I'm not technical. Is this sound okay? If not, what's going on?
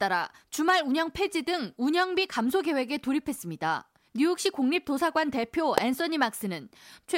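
No. An electrical switching spike snaps at 5.78 s, a sharp click over the speech, likely from a nearby switch or motor arcing and the audio cable picking it up.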